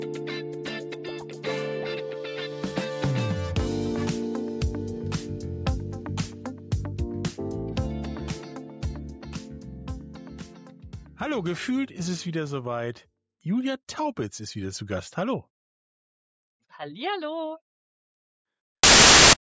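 Near the very end, from 18.83 to 19.33 s, the audio gives way to a half-second blast of very loud white noise that starts and stops with hard, clean edges. This is file tags played as audio: an embedded cover picture, stored as compressed data, has been read out as though it were sample values. Because compressed bytes are close to random, they decode as very loud broadband static rather than anything tonal.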